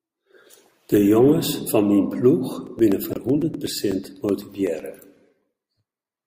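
From 2.67 s to 6.17 s, periodic USB or driver dropouts set in: something stalls the audio driver every 0.125 s, and each stall replaces a few milliseconds of speech with silence. The result is a steady ticking, eight per second and around thirty in all, riding over the speech.

From 3.10 to 3.17 s, a corrupt frame was decoded. Flipped bits in the compressed stream were played as if valid, putting energy at the wrong frequencies for about 70 ms, which points to a few damaged frames. It comes through as a brief chirping burst peaking near -15 dBFS.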